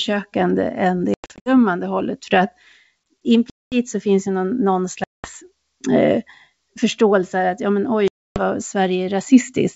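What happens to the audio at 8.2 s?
Packet loss on an ADPCM call: from 8.08 to 8.40 s, right after "förståelse att ja men", about 280 ms of audio, roughly fifteen packets' worth, drops to a hard-edged silence. The decoder's predictor and step size lose sync, so the speech resumes slightly distorted before settling.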